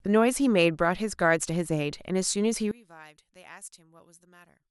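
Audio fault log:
2.71–4.71 s, one channel inverted: from 2.71 s to the end the speech collapses by about 25 dB, leaving a faint remnant. The likely cause is reversed polarity on one stereo channel, so when the two are summed to mono the centred speech they share cancels, and only the small difference between the channels survives, which is why what remains is only a faint copy.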